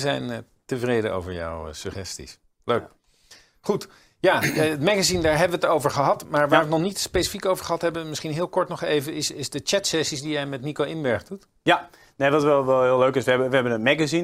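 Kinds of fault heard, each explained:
No faults can be heard anywhere in this recording.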